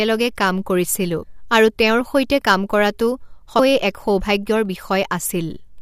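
Damaged data in a compressed stream breaks this speech clip twice: a brief glitch at 1.22 s, right after "কাম কৰিছিলো", and again at 3.58 s, after "তেওঁৰ সৈতে কাম কৰাটো". Corrupted bytes made the decoder misread those frames and lose sync until it found the next frame header.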